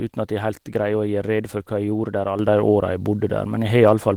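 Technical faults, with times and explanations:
2.39 s to the end: sudden gain jump. The likely cause is a digital gain setting applied in one step with no ramp, so the signal level rises by about 6 dB from one sample to the next and stays there. The speech and the background noise jump together, which marks it as a change in the signal chain rather than the talker getting louder. The light Opus coding stays the same across the jump.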